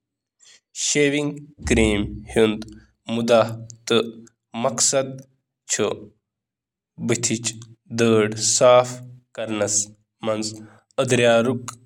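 No technical faults can be heard anywhere in the recording; the speech signal stays continuous and stable throughout.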